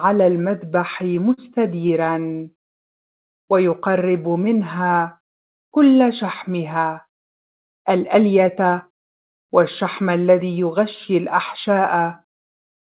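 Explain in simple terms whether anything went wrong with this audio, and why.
Several things went wrong, all from audio packets arriving off schedule in a call.

At about 1.34 s there is a short stall from a late packet. One piece of audio hadn't arrived on time, so the receiver held the last sound for about 38 ms until it came, then carried on from the same spot. Nothing is lost; the sound just hangs for a split second. It is a single hold, which is what separates it from the stutter that follows.

From 1.88 to 2.80 s come repeated stalls, a stutter. The audio freezes and restarts five times, adding about 127 ms in total. The longest freeze is 85 ms, long enough that the held sound fades rather than simply stretching. Again nothing goes missing, but the sound drags and catches. The freezes are separate and uneven, unlike the smooth change in pace described next.

From 3.80 to 4.79 s there is a jitter buffer slow-down. 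The receiver was running short of stored audio, so it quietly repeated tiny slices of sound to build up a reserve. The audio plays at about 94% speed, adding roughly 64 ms, but the pitch stays the same. It sounds drawn out rather than stuck, with no distinct freezes.

From 6.76 to 8.65 s there is a jitter buffer speed-up, the opposite correction. Too much audio had piled up, so the receiver trimmed out small slices, about a tenth of a second in all. The sound runs at about 106% speed, slightly hurried, with the pitch unchanged. It differs from the slow-down only in direction: faster instead of slower.

Throughout, the call connection cuts off everything above 4 kHz, which fits a standard telephone-grade codec.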